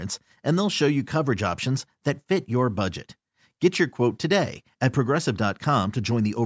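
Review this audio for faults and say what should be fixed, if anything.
No faults can be heard; nothing needs fixing.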